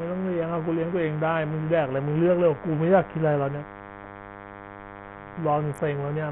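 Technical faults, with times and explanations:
Throughout, DECT cordless phone buzz: a thin, steady buzz sits roughly 15 dB under the speech. A nearby DECT transmitter sends a radio burst every 10 ms, and the audio circuit rectifies it. A spectrogram shows even horizontal lines at 100 Hz and many harmonics.
Throughout, Bluetooth SBC compression: the treble flickers in and out, and a gritty, aliased grain rides on the speech. This is likely from SBC coding starved of bits, which fits a rate near 48 kbps. The spectrogram shows top bands blanking in patches, with coarse, blocky texture below.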